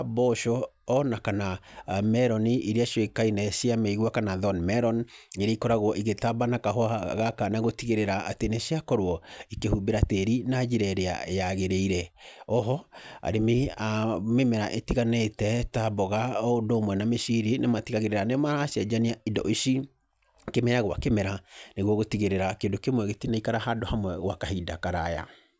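From 16.0 to 18.0 s, the speech carries a steady tick four times a second, the mark of a resampler restarted on every block. Each block, consistent with 250 ms chunks converted from about 44.1 kHz down to 16 kHz, was processed without its neighbours' samples, leaving a small error at every seam. Unlike dropout clicks, which fall irregularly, these ticks keep an exact 4 Hz rhythm and sound only while the voice is present.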